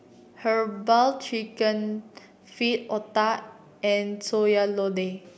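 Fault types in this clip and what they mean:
Nothing stood out on listening to this speech.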